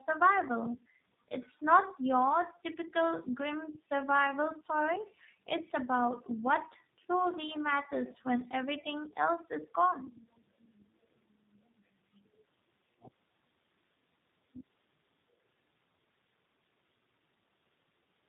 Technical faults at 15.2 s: tandem speech coding

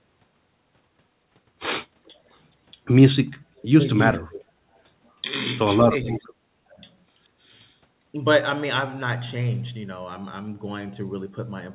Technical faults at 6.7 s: speech suppressed in double talk

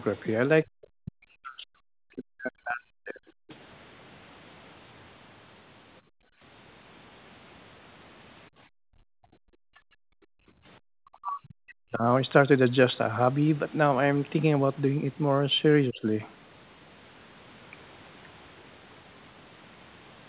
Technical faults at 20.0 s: none

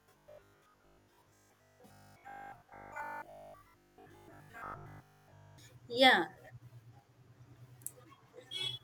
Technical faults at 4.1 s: robotic sound from repeated short buffers

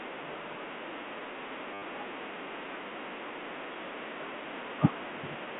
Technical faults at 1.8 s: packet loss with last packet repeated

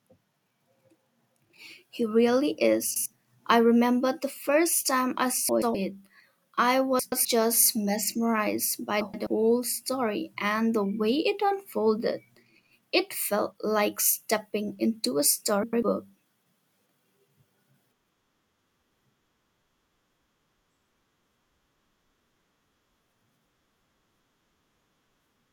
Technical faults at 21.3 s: none

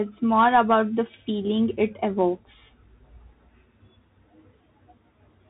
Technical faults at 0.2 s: Bluetooth CVSD headset codec

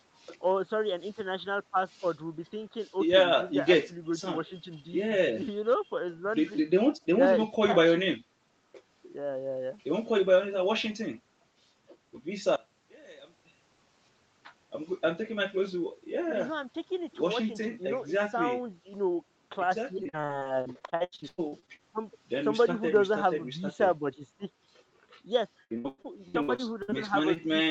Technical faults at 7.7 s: none

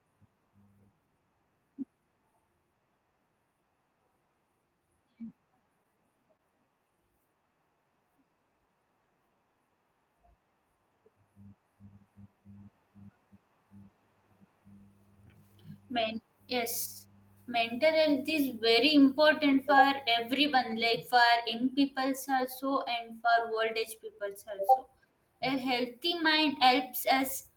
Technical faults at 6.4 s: short stall from a late packet

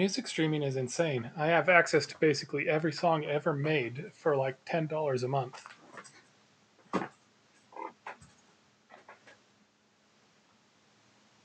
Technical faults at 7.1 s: none

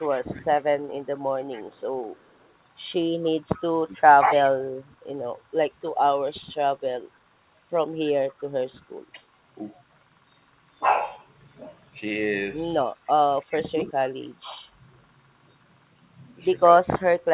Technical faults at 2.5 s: echo leak

